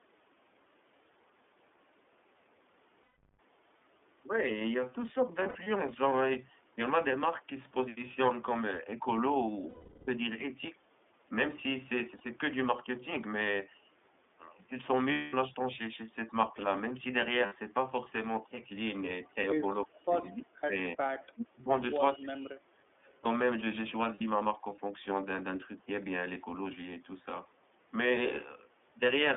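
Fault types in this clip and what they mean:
iLBC codec: The call was carried on iLBC, a narrowband codec that codes each 30 ms frame on its own, which fits its 13.33 kbps mode. The sound is confined to about 250 Hz to 3.5 kHz and has a plainly rough, synthetic edge throughout.
Lost iLBC frames: Packets went missing and the decoder filled the gaps by repeating the last pitch cycle mixed with noise. Held, buzzy vowel-like stretches appear at 3.03, 5.42, 9.69, 12.18, 15.12, 17.46 and 24.15 s, the longest lasting 390 ms, with clean sound resuming almost immediately.
Speech suppressed in double talk: The echo canceller likely could not tell the talker from loudspeaker echo while both sides spoke, so it turned the signal down. Between 19.85 and 22.9 s the speech dips sharply, by about 30 to 40 dB, in four separate patches.
Echo leak: One side's echo canceller likely let part of its loudspeaker pickup through and sent it back. 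A faint copy of the speech, delayed by 319 ms, is heard at about 20.2 s and 23.07 s, roughly 30 to 40 dB below the speech.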